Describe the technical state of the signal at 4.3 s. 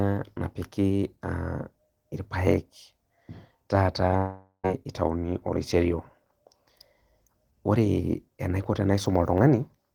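At 4.3 s the speech is inside a long network dropout, 4.17 to 4.66 s: the last sound smears into a fading buzz, then silence, likely from lost packets, with about 0.46 s never recovered.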